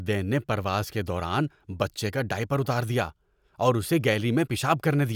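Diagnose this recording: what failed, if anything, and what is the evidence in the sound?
Careful listening to the speech turned up nothing that stood out as a failure at any point in the chain.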